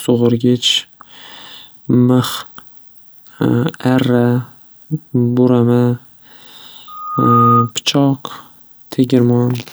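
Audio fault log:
6.87–7.72 s, loudspeaker feedback squeal: a steady tone at 1.2 kHz swells over roughly half a second into a piercing squeal, ending up about 5 dB above the speech, then stops. The microphone was picking up its own loudspeaker, and at that frequency the loop gain exceeded one.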